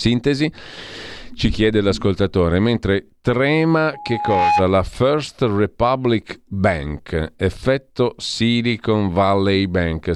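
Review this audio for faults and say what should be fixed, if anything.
Loudspeaker feedback squeal from 3.93 to 4.66 s: a single tone at 833 Hz swells over roughly half a second until it sits about 5 dB above the speech. The microphone is picking up its own loudspeaker, and at that frequency the loop gain exceeds one, so the tone keeps feeding itself until the loop is broken. To prevent it, lower the monitor gain, keep the loudspeaker out of the microphone's pickup pattern, or notch out the 833 Hz ring frequency.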